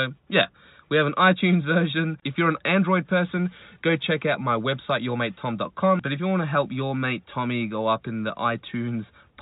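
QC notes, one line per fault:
No faults found; the speech sits within the 4 kHz ceiling of a normal G.711 mu-law telephone path at 64 kbps, with at most a faint level-following noise floor.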